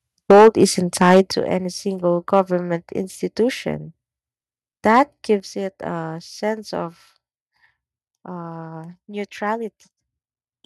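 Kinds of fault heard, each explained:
Microphone overload: The loudest speech peaks are flattened, giving a harsh, crackly edge, likely because the mic input is set too hot and the peaks run into the converter's ceiling. It's worst at 0.3 to 0.65 s, pushing about 10 dB over with a fair chunk of the waveform squared off, then 1.01 to 1.21 s at about 6 dB. Milder hits follow at 2.33 to 2.41 s, just after "any single," and at 4.88 to 5.0 s.
Microphone volume stepped down: The whole level, speech and background together, drops in one sudden step, likely the call software catching the mic running hot and turning its input gain down. The first step, about 4 dB at 0.31 s, lands inside that first distorted burst. A bigger step of about 8 dB comes at 1.32 s, right before "any single." A third, about 6 dB, comes at 5.4 s, just ahead of "it a sense of."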